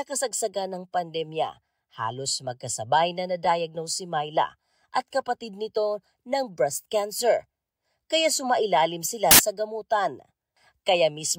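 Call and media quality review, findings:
Samples built from the wrong bytes, 9.31–9.39 s: burst of loud, harsh broadband noise over the speech. Sample reader misassembling bytes, so the fast-changing low bits become the large part of each value.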